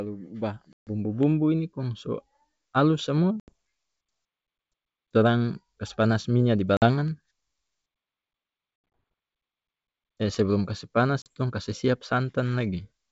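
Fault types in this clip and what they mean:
Packet loss on an ADPCM call: dropped packets leave five bursts of hard-edged silence, losing 40 to 140 ms each, after which the desynchronised decoder resumes slightly distorted.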